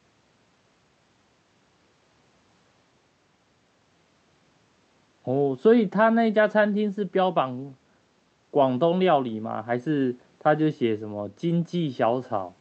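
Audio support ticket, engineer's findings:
No faults found in this speech clip. Call path audible as a wideband codec, top end stopping around 8 kHz, which fits Opus at about 64 kbps through a working jitter buffer.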